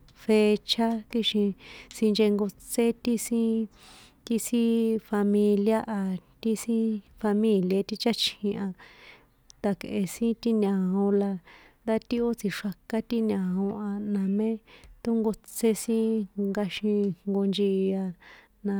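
No technical faults can be heard anywhere in this speech.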